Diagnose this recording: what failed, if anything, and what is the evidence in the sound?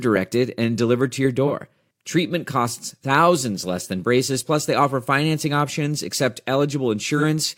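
Two brief smeared, noisy patches, at 1.46 to 1.52 s just after "and delivered to your" and at 7.17 to 7.24 s, point to AAC frame loss with concealment at the codec stage. Each gap spans about 43 ms, one frame, which the decoder filled by reusing the previous frame's spectrum.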